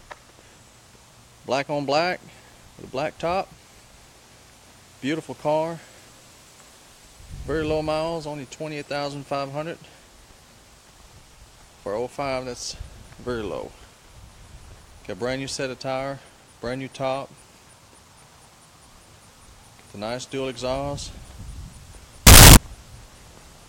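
From 22.27 to 22.57 s the sound abruptly turns into a very loud, harsh, buzzing blast lasting about 0.3 s. The waveform there is nearly square and sits at an almost fixed, high level, and any background noise comes through as loud as the main sound, though its pitch can still be followed. This is a float read as integer fault, likely caused by 32-bit float samples being interpreted as 32-bit integers, so sign and exponent bits dictate the level.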